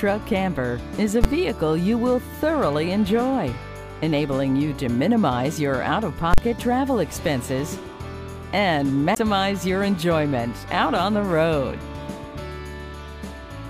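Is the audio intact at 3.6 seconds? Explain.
Yes, the audio is intact at 3.6 seconds, with no fault audible at that moment.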